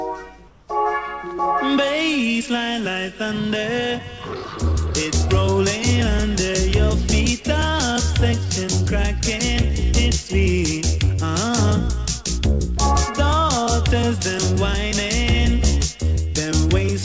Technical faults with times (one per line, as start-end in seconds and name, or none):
0.48-0.68 comfort noise in place of the background